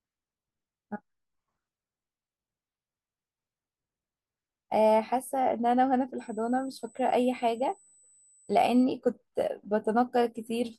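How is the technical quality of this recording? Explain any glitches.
The recording has one glitch: USB whine from 6.18 s to 8.84 s. Current drawn by the USB bus in 125-microsecond microframes is leaking into the audio path through shared power or ground, so the bus's 8 kHz frame rate and its harmonics show up as a steady, fixed-pitch tone. The second harmonic at 16 kHz is the strongest component, giving a whine sitting roughly 30 dB below the speech for those few seconds.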